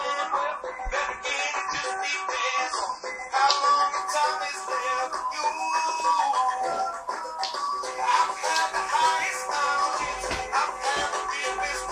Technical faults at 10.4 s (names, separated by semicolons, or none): none